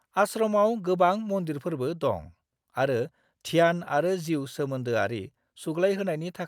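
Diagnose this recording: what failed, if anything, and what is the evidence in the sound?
Nothing here points to a failure at any stage of the chain, so there's nothing to diagnose in this speech recording.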